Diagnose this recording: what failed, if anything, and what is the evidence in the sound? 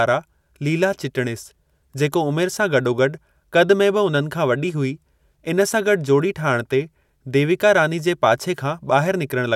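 Nothing failed in this recording.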